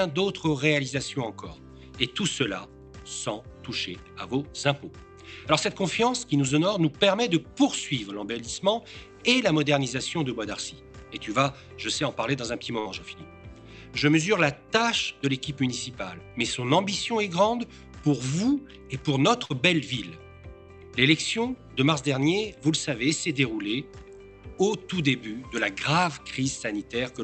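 At 12.79 to 12.88 s and again at 19.45 to 19.53 s, a burst of packet loss briefly freezes the sound into a sustained buzz or hiss that fades over about 50 ms. About 60 ms of audio is skipped, not just silenced, which sets it apart from a plain dropout.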